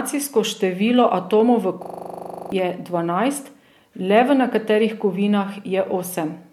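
Right after "število atomov v", from 1.84 to 2.52 s, there's a system hang loop: the machine froze while the sound hardware kept replaying one 40 ms chunk of its buffer, 17 times at 25 Hz. It comes across as a rough stuttering buzz, and roughly three-quarters of a second of speech is lost before "je dvanajst".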